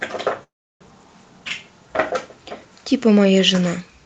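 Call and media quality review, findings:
Call audio freeze, 0.43 to 0.83 s. Speech halts. A brief fading fill, then about 330 ms of silence. Likely a jitter buffer underrun after delayed packets. Playout resumes exactly where it stopped. No speech lost. Everything after runs about 370 ms late. Band tops out near 8 kHz, consistent with an Opus call path.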